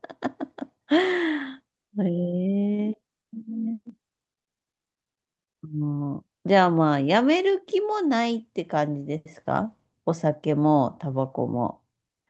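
No technical faults turn up anywhere in this speech recording. It has passed through a call codec working as designed, with the top of the spectrum rolled off at about 8 kHz.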